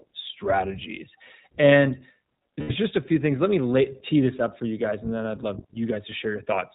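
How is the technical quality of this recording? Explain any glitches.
The recording is narrowband and plainly coded throughout, with one brief dropout in the middle.

The whole clip sounds boxed-in and slightly rough, with a synthetic edge to the speech and nothing audible above 4 kHz. That is the iLBC codec at work: it squeezes speech into a telephone-band signal and models each short frame's excitation on its own, and the character here fits its 15.2 kbps mode with 20 ms frames. The damage is clearly audible, though the speech stays intelligible.

From 2.60 to 2.71 s, just before "just a few things", the speech briefly turns into a held, faintly buzzy and breathy vowel-like sound. These are lost iLBC frames. Packets went missing, and the decoder filled the roughly 100 ms gap, which fits about five 20 ms frames, by repeating the last pitch cycle blended with noise. Because each iLBC frame decodes independently, the speech snaps back cleanly at "just a few things".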